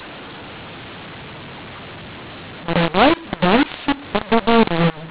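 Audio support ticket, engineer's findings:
mu-law and A-law mixed up, entire clip. Speech harsh and distorted, levels scrambled, pauses filled with noise. A-law G.711 stream decoded as mu-law at the receiver.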